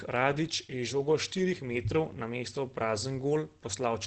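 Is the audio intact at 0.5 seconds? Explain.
No. At 0.5 seconds the speech sounds muffled and hoarse, with nothing above about 8.8 kHz, and this coloration runs through the whole clip rather than only at that moment. The likely cause is Opus compression: at a low rate, which fits roughly 16 kbps, the encoder drops into its SILK speech mode with wideband bandwidth, modelling the voice crudely and discarding the upper band. That leaves plainly audible codec damage.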